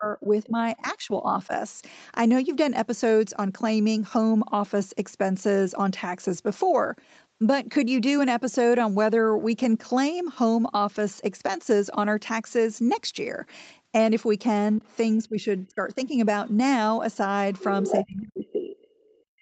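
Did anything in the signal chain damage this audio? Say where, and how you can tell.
Yes, and it's all in the call-processing stage, specifically the echo canceller. The first problem is speech suppressed in double talk. From 0.00 to 1.52 s the talker's level dips by around 10 dB, in pieces adding up to under a second. From 14.79 to 16.18 s it drops harder, about 20 dB. From 18.03 s to the end it sinks by roughly 30 dB. That pattern likely comes from the canceller seeing both ends active, failing to separate talker from loudspeaker echo, and ducking everything.

The second problem is the other side's voice leaking through, meaning far-end audio that the canceller likely didn't fully remove from the mic. It's faint at 14.77 to 14.96 s, about 35 dB under the speech, and barely there at 16.47 to 16.51 s, around 40 dB down. At 17.58 to 17.93 s it's obvious, only about 10 dB below the talker. 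Then it's faint again from 18.47 to 19.21 s, about 40 dB down, overlapping that last ducked stretch.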